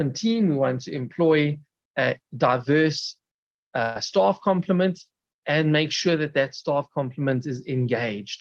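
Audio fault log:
3.82–3.97 s, burst of packet loss: about 130 ms of audio failed to arrive in time, so the receiver extended the last sound it had across the gap while turning it down. This gives a held, fading buzz or hiss, then a jump forward with that stretch missing. On a spectrogram, the harmonics or noise freeze into flat bands that dim before the pattern abruptly resumes. The waveform shows a repeating, shrinking cycle rather than silence, and sits beneath a 12 kHz ceiling consistent with Opus.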